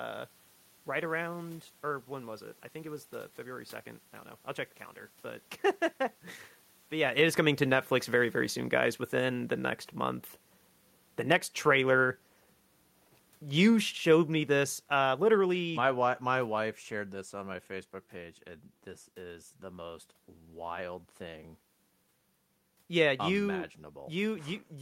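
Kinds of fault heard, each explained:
Automatic gain falling: The gain control judged the input too loud, or its background noise too strong, and turned itself down step by step. Here it happens twice. Just after "very very", from 8.61 to 12.29 s, the level sinks by about 5 dB. From 13.49 to 16.73 s it drops again, by about 8 dB, ending just before "shared this on my". The room noise sinks along with the speech, so the whole sound recedes.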